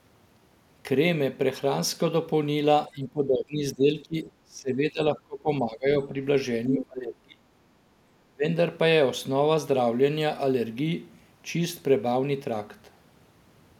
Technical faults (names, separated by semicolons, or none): speech suppressed in double talk; background gated by the echo canceller